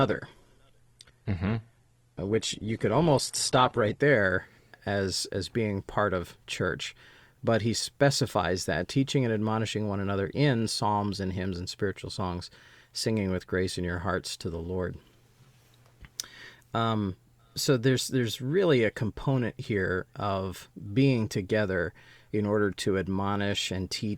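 From 0.0 to 4.0 s the speech plays from an adaptive stream starting at a low bitrate. The treble is dull, with nothing above 12.1 kHz, and codec artefacts are strong. This fits Opus near 16 kbit/s. At 4.0 s quality jumps, without a gap, to what fits 64 kbit/s.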